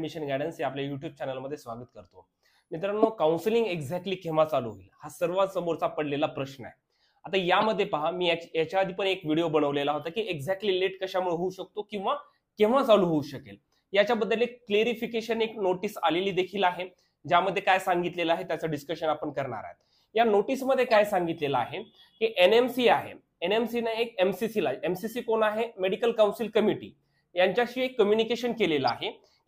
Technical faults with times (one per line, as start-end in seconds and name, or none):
3.02-3.05 corrupt frame decoded
7.61-7.64 corrupt frame decoded
20.91-20.95 corrupt frame decoded
28.85-29.00 corrupt frame decoded